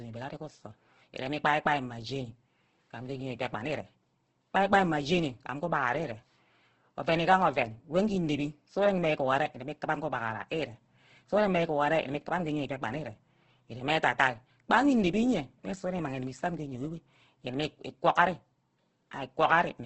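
Throughout, the speech turns grainy and rough and stops dead at 8.3 kHz, heavy damage likely from Opus compression at a bitrate near 12 kbps.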